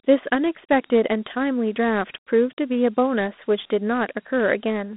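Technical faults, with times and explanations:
Throughout, Dialogic VOX ADPCM: the speech sounds thin, boxed in and telephone-like, with a gritty, grainy hiss that rises and falls with the voice and is plainly audible. There is nothing above 3.8 kHz and little outside roughly 200 Hz to 3.6 kHz. The sound points to 4-bit OKI ADPCM at 32 kbps, which fits an 8 kHz sample rate. Coding each sample as a coarse step against a prediction leaves quantisation noise that follows the signal's level.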